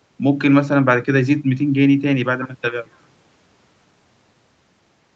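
No faults found in this speech: the audio is band-limited to about 8 kHz with the coding texture of a call codec, consistent with an Opus call path, and nothing else calls for attention.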